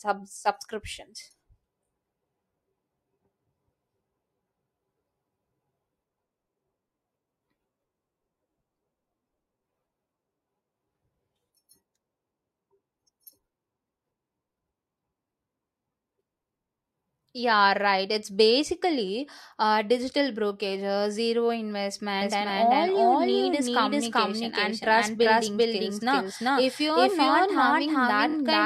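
Speech clip with two faults near its end. From 22.22 s to the end, a doubled audio track appears: a second full-band copy of the speech enters abruptly and runs roughly 0.4 s behind the original, at about the same level. It has no decay or room colouring, so it sounds like a clean, late duplicate rather than an echo. The likely cause is the signal being captured a second time through a slower path, or an edit leaving two copies out of step. Between 28.29 and 28.34 s, repeated frames produce a short stutter. A 23.2 ms block plays twice more than it should, adding 46.4 ms to the audio. That block length fits a 1024-sample codec frame at 44.1 kHz, so a single compressed frame was written or sent three times in a row.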